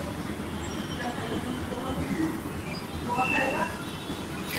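Filter restarted on every block, from 3.07 s to the end: the filter drops its state each block, giving a level-following 188 Hz buzz that fits a 256-sample block. Lost packet rebuilt from error correction, at 3.35–3.37 s: a low-bitrate backup copy fills one 20 ms gap, so that short stretch sounds rougher and noisier instead of dropping out.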